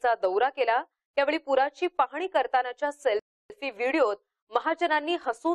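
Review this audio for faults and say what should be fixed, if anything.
The player's buffer ran dry at 3.19 s, causing a rebuffering stall. Playback halted until more data arrived, leaving silence until 3.50 s. The audio then resumes exactly where it stopped, so nothing is missing, but 0.31 s of dead air is added. To prevent it, keep a deeper playback buffer or lower the stream bitrate when bandwidth drops, so downloads stay ahead of playback.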